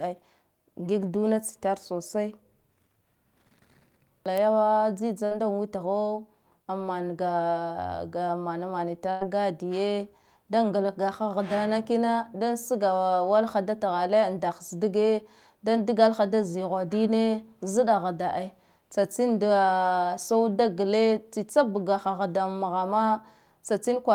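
Speech with a burst of packet loss twice: at 5.25 to 5.33 s, before "witho an", and 9.11 to 9.23 s, before "gadiye da". About 60 and 100 ms of audio vanish; the receiver stretches the last sound into a decaying buzz or hiss, seen as a flat, fading stretch ending in an abrupt restart.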